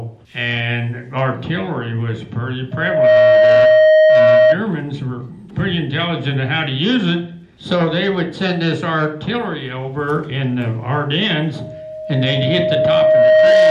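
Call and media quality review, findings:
Loudspeaker feedback squeal, 2.71–4.57 s and 11.55–13.70 s: single 625 Hz tone, mic-speaker loop gain above unity. Spectrogram shows a bright horizontal line, rising within about 0.4 s, then over about two seconds, ending roughly 10 dB above the sound.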